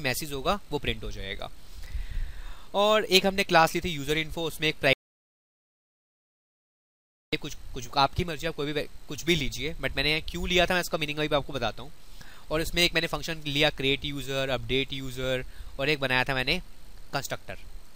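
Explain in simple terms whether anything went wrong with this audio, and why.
Between 4.93 and 7.33 seconds the sound stops abruptly and comes back just as suddenly, leaving about 2.4 seconds of complete silence. This is an audio dropout to silence. The recording likely kept running while its input was briefly lost, for example through a loose connection or an accidental mute, so it wrote only silence. What tells it apart from a natural pause is that even the background sound of the room vanishes, and whatever sounded in that gap is gone.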